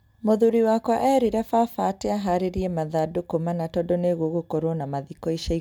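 Recorded speech, with no technical faults audible anywhere in the signal.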